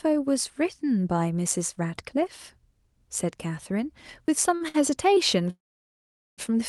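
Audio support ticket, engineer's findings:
Audio missing between chunks, 1.79 s and 4.28 s. Abrupt skips of about 10 ms, sides butted together with no silence. Spacing of 2.49 s fits a 2.5 s chunk size. Likely cause: recorder or processing stage dropping samples while closing one chunk and opening the next. Small discontinuity at each join, speech jumps slightly forward. Check chunk handoff in capture or processing pipeline.

Short stall from a late packet, 4.55–4.62 s and 4.68–4.76 s. Speech briefly held and stretched, 50 ms then 58 ms, with a slight buzz or dip. Jitter buffer ran dry when packets arrived late. Receiver extended the last sound, then resumed at the same point. Nothing lost, timing pushed back by the fill length. Two stalls close together point to network delay variation.

Call audio freeze, 5.50–6.40 s. Last sound continued as a fading fill, then about 810 ms of silence, roughly 875 ms inserted in total. 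Likely cause: packets held up in transit, jitter buffer empty for the whole wait. Speech resumes where it stopped, nothing missing, just a gap added. Same late-arrival behaviour as the stalls above, but longer.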